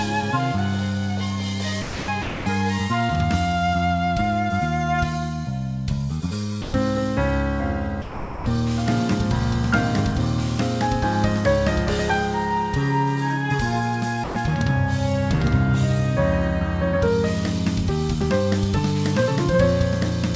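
At 1.82 to 2.08 s, 2.22 to 2.46 s, 6.62 to 6.74 s, 8.02 to 8.46 s and 14.24 to 14.36 s, the sound briefly gives way to a smooth, steady hiss before returning. This is likely sound dropped by the voice detector, with the sender treating those moments as background and the receiver filling the gaps with comfort noise. Throughout, nothing is heard above 8 kHz, which fits a wideband call codec.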